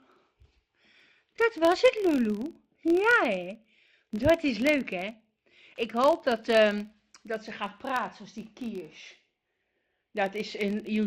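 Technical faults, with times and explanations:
Throughout: filter restarted on every block, each block starting from zero state, giving a 43.1 Hz tick-buzz that tracks level, which fits a 1024-sample block.
1.36 to 1.40 s: frames out of order, two adjacent 20 ms frames swapped and decoded reversed, producing a brief garbled flutter.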